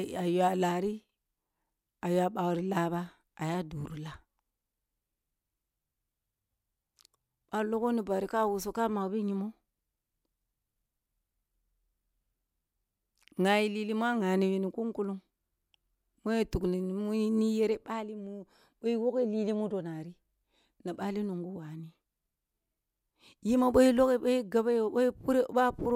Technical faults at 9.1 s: DAB burbling

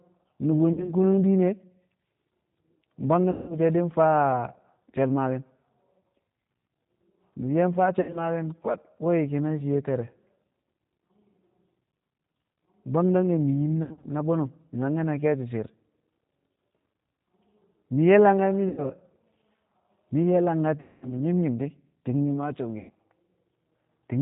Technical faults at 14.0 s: G.729 codec; VoIP packet loss concealed by the speech codec

